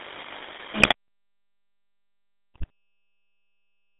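Throughout, the speech carries GSM full-rate codec damage, plainly audible as a buzzy, gravelly roughness from the pulse-driven vocal-tract model. The line band runs from 250 Hz to 3.7 kHz, and the coarseness fits the 13 kbps full-rate coder.

GSM bit errors break in from 0.80 to 0.94 s and again from 2.54 to 2.70 s. Corrupted filter, pitch and gain values reach the decoder, so several consecutive frames turn into squawks, pops and gargling, consistent with a few percent of bits flipped.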